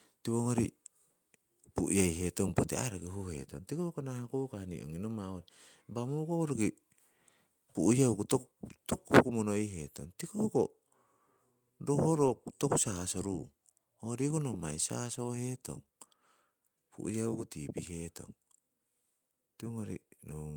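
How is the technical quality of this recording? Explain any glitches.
The speech has two small level drops. At 8.16 s and again at 9.19 s, voice and background fall together, by about 1 dB and then about 2 dB. This is likely a microphone volume stepped down by the call software. Unlike a compressor's gradual gain riding, each drop is instant and then holds.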